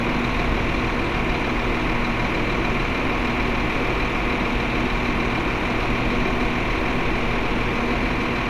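No technical faults can be heard anywhere in this recording; the signal holds steady throughout, with nothing interrupting or disturbing it.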